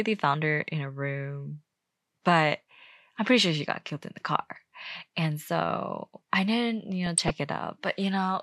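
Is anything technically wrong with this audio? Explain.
Yes. From 7.06 to 7.30 s the speech is broken by short noise blips in single sub-bands, the signature of DAB burbling, across 10 frames at roughly a 0.2% bit error rate. Weak reception let bit errors slip past error correction into the MP2 data, corrupting samples in individual sub-bands.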